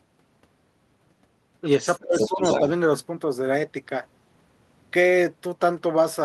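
Other side's voice leaking through at 1.89 to 2.02 s: a faint second voice, about 15 dB under the speech, likely loudspeaker echo the canceller missed. Speech suppressed in double talk from 2.02 to 2.42 s: the talker dips by up to about 25 dB, likely because the canceller turned both sides down. Other side's voice leaking through again from 2.19 to 2.6 s, now only about 5 dB below the speech.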